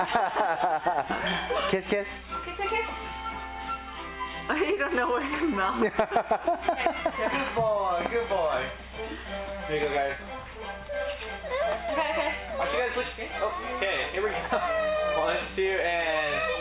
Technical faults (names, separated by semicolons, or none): none